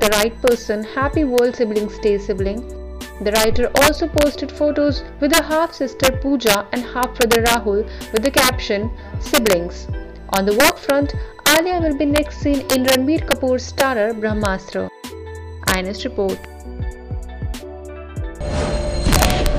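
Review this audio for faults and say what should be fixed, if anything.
Integer overflow runs through the whole clip. The signal is driven about 5 dB past full scale, and instead of being limited, each peak that exceeds the integer maximum wraps to the opposite sign. That happens on only a small fraction of samples, around half a percent, but every one produces a sharp, violent crack on loud passages, harsher than clipping. On the waveform, those peaks jump from one rail straight to the other. On the spectrogram, they show as thin broadband vertical streaks. To prevent it, use saturating arithmetic or a limiter before conversion, and keep enough headroom.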